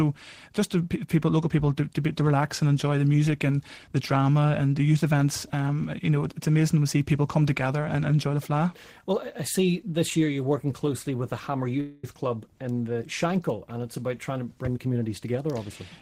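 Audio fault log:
11.80–12.04 s, call audio freeze: for 230 ms the sound stops moving forward and the last moment is stretched into a buzzing or hissing continuation that fades, the likely result of packets held up in transit leaving the jitter buffer empty. Nothing is lost; the audio picks up exactly where it halted, so everything after arrives 230 ms later. On a spectrogram the final spectral slice smears horizontally into a flat, decaying band; the waveform shows a repeating, shrinking pattern before normal detail resumes.
14.62–15.53 s, jitter buffer speed-up: the audio plays at about 115% speed while keeping its pitch, so it sounds hurried. The receiver, holding more buffered audio than its target, trimmed short pitch-period pieces again and again, removing roughly 150 ms in total. On a spectrogram harmonics keep their spacing but events are compressed in time; the waveform shows cycles joined at small seams where slices were cut out.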